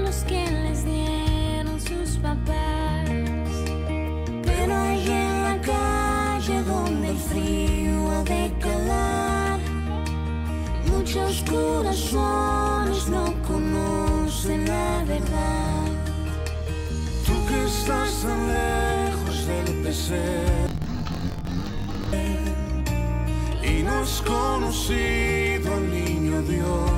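From 20.67 to 22.13 s, interleaved audio read as planar splits each 21.77 ms block into halves, halving speed: an octave-low, choppy doubling, with harmonics compressed downward and 45.9 Hz block seams on the spectrogram.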